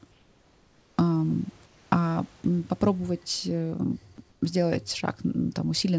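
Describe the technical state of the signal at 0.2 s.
At 0.2 s the signal sits inside a stretch of comfort noise in place of the background, running from 0.12 to 0.98 s. The room's own background, about 35 dB below the loudest speech, gives way to a smooth, featureless hiss about 4 dB quieter. This is likely discontinuous transmission, with the receiver synthesising noise while the sender goes silent. On a spectrogram the band looks uniform and textureless, stopping at 8 kHz like the rest of the call; the waveform shows a flat, steady noise floor.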